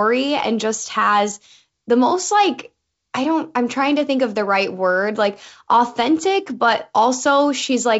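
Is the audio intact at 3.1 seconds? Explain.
Yes, the speech at 3.1 seconds is intact, with no audible fault beyond the wideband telephone character of the G.722 coding at 64 kbit/s.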